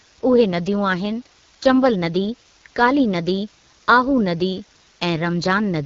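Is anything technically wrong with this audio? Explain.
Yes, the speech carries two faults that run through the whole clip.

The first is low bit depth with dither. A steady, even hiss sits roughly 30 dB below the speech, consistent with about 8-bit resolution. Dither turns the rounding error into constant white noise, so there is no crunchy distortion that rises and falls with level as undithered quantisation would give.

The second is the AMR wideband (HD Voice) codec. Nothing is present above 7.5 kHz, and the speech sounds clearly rough and raspy, which points to a low AMR-WB rate near 8.85 kbit/s. The model-based coding roughens voicing, so the damage follows the speech itself, unlike the even, level-independent hiss of the dither.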